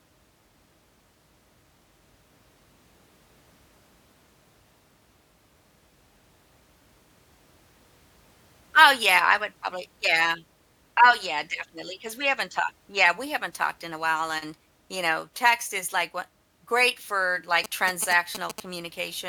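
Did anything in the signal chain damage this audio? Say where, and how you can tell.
Yes. From 17.64 to 18.60 s, right after "like wha great for", GSM signalling bursts break in as a galloping run of short buzzes at about 217 Hz, roughly 10 dB under the speech. A nearby handset's radio bursts were rectified in the analogue wiring.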